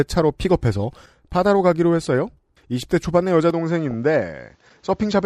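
At 3.50 s the recording most likely switched its input to a poorer device, which passes nothing above 7.6 kHz. From there to the end the speech turns duller and boxier, with no gap at the switch, much the same level, and a faint new noise floor far below the speech.

From 3.91 to 3.94 s, DAB burbling appears where bit errors at a rate of a fraction of a percent slipped past error correction into the MP2 data, corrupting samples across what sounds like a few frames. Short blips of noise appear in single sub-bands, giving a brief burble.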